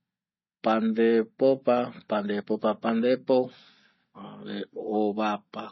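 From start to finish the speech sounds dull and watery: nothing above about 5.9 kHz, with swirly, metallic s sounds. The likely cause is heavy MP3 compression, fitting about 24 kbps, which cuts the treble and drops weak frequency lines that flicker between frames.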